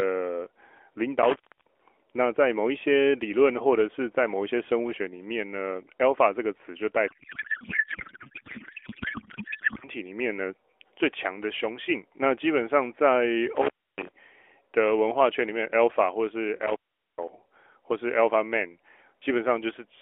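Intermittent contact at 1.22 to 1.82 s: a loose plug or cable briefly opens, and the speech drops out for about 0.31 s with crackle at each edge where the connection breaks and remakes. While the line is open faint hiss remains. The same fault returns at 13.55 to 14.09 s, opening for about 0.28 s, and at 16.62 to 17.28 s, where the gap stretches to about 0.42 s, each time bracketed by the same scratchy crackle.

Codec payload misread from 7.08 to 9.89 s: the speech travels over AMR narrowband, the mobile codec. The sending side packs each frame octet-aligned while the receiver unpacks it as bandwidth-efficient, so every field lands in the wrong place. The decoder still accepts the frames, but what comes out is garbled noise and warble that barely tracks the speech. Normal speech returns at 9.89 s, once both ends read the bits the same way.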